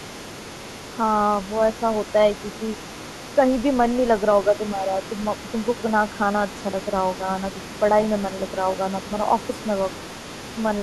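From 0 to 10.83 s, the other side's voice leaks through, roughly 20 dB below the main speech. Loudspeaker echo likely escaped cancellation.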